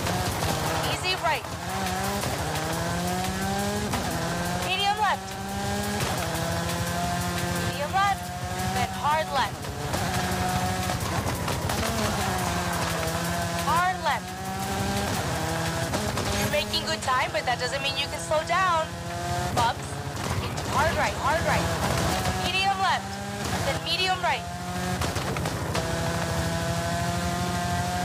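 From 20.56 to 22.12 s a doubled audio track appears: a second full-band copy, about as loud as the original, trails it by roughly half a second, likely from a slower second capture path. Unlike an echo, it has no decay or room colour and starts and stops abruptly.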